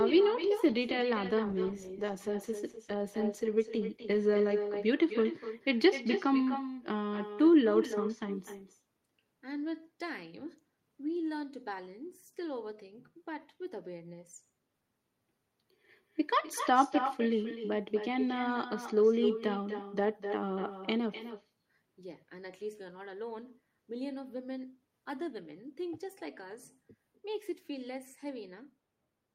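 Throughout, every phrase is trailed about a third of a second later by a thinner copy roughly 8 dB quieter: echo with no canceller, the far end's loudspeaker feeding its microphone. From 1.46 to 4.95 s the speech turns rough and muffled, a call bitrate drop consistent with the encoder falling from around 32 to 17 kbps.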